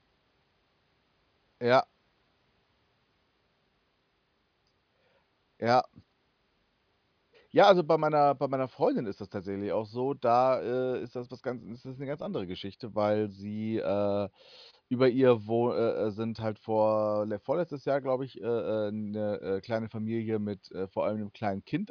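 Nothing in this speech recording stands out as a technical fault, so there's really nothing to flag here.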